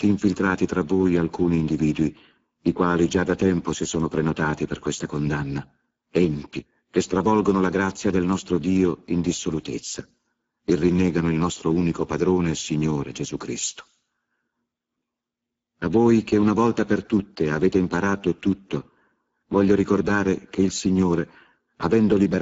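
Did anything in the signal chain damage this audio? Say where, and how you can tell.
Yes, at the codec stage. Speex coding throughout leaves the speech hoarse and noisy, with nothing above 7.7 kHz. That fits a low bitrate starving the excitation.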